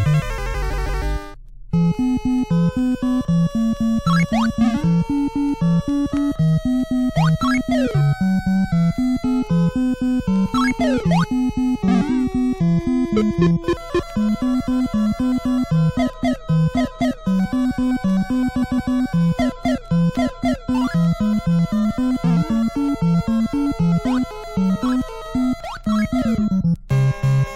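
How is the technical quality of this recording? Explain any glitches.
The recording has two glitches, both repeated frames. The same compressed block of about 157 ms, consistent with a run of six frames, was delivered three times in a row, at 0.72 to 1.03 s and again at 18.62 to 18.93 s. Each time the decoder replays that fraction of a second, producing a stutter and adding about 0.31 s.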